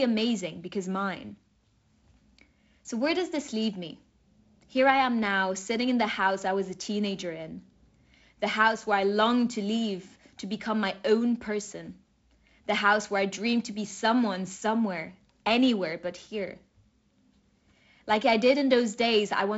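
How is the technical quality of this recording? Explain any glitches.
No glitches turn up anywhere in the recording. The speech comes through G.722 wideband telephone coding at 48 kbit/s, with content reaching up to about 7.7 kHz and only a faint coding hiss from the reduced bit allocation.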